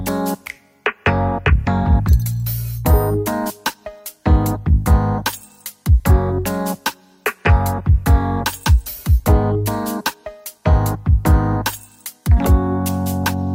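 Nothing here trips up the ear at any point; it's a calm listen with no fault to report.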